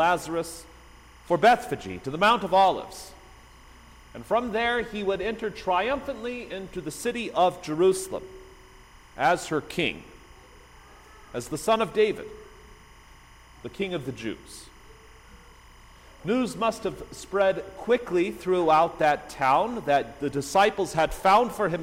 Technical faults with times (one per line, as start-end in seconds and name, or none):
0.00-21.82 timecode bleed